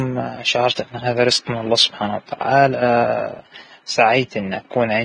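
From start to finish the speech carries heavy coding damage, most likely Vorbis compression run at a low quality setting. Nothing comes through above about 9.7 kHz, so the top end feels dull and capped, and the treble that remains has a hissy, grainy texture where fine detail has turned into noise. Voiced sounds come across rough rather than clean, and consonant onsets are smeared. That degree of damage fits a bitrate of around 23 kbps.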